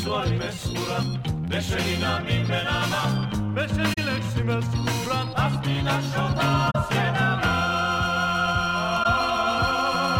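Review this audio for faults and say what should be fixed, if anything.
AAC frame loss with muting causes three short dropouts at 3.93–3.98 s, 6.70–6.76 s and 9.03–9.06 s. The decoder zeroed the missing spectra, so overlapping windows fade the sound out and back in. The first two gaps span about 43 ms, fitting two lost frames; the last, about 21 ms, fits one. Fix it with error concealment in the decoder or a more reliable transport.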